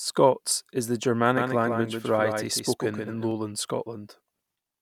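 From 1.37 s to 3.31 s the speech is heard twice: a second full-band copy trails the original by roughly 150 ms, a few decibels quieter, with no decay or room colour of its own, and it cuts in and out abruptly at both ends. This is a doubled audio track, likely from the same signal being captured again through a slower path, or from an edit that left two copies running out of step.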